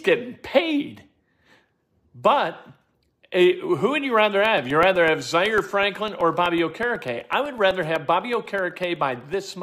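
After "who would you rather", 4.45 to 9.46 s, periodic USB or driver dropouts blank roughly a millisecond every 0.125 s: steady ticking.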